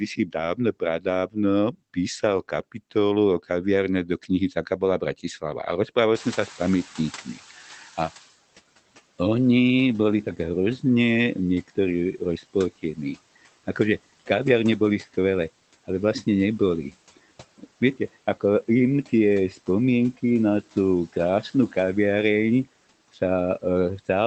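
Between 0.16 and 3.5 s the speech thins out in places, with soft consonants and word endings sinking by up to about 18 dB, roughly half a second of it in all. This is speech cut by the noise suppressor, which mistakes low-level speech for background and turns it down. Shorter dips of about 12 to 14 dB follow at 4.05–5.24 s, 5.88–7.38 s, 11.68–13.17 s after "oni boli tak hrozne", 17.17–18.42 s after "vlastne neboli", 19.09–20.23 s just before "na tú", 21.13–21.76 s and 22.65–24.08 s, each affecting only a tenth to a fifth of a second.

Around 6 s the room noise jumps by about 23 dB and first comes through with less reduction. It then fades over the next 2.17 s, until 8.31 s, finally sitting about 12 dB lower. That is the noise suppressor catching up: its noise estimate lagged behind the sudden rise and needed that long to adapt. The sound is band-limited to about 8 kHz, which fits a low-bitrate Opus call path.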